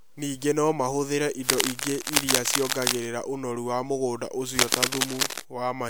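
A worn cable, connector or control carrying DC was likely being moved, its contact resistance jumping about, from 1.48 to 3.07 s. That fluctuation injects dense, irregular bursts of noise, heard as scratching and rustling laid over the speech at roughly the same level as the speech. The cable scratch noise returns from 4.59 to 5.41 s, this time around 5 dB louder than the speech, with the same uneven crackle.

Inside that second stretch, from 4.69 to 4.72 s, pre-echo occurs. The transform codec spread its quantisation noise across a whole block, and a sharp attack late in that block meant noise scaled for the loud part also filled the quiet moment before it. The result is a hiss of about 32 ms running ahead of the attack, which sounds softened and smeared.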